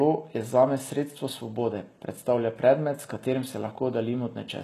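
Speech, with plainly audible HE-AAC compression throughout, likely from very low-bitrate encoding near 16 kbps. Ordinary low-bitrate coding would simply dull the top. Here the treble stays bright up to a ceiling at 12.3 kHz but is rebuilt from copied lower bands, so s sounds turn gritty and metallic.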